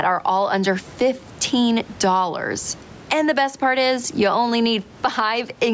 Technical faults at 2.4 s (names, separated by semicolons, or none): gain pumping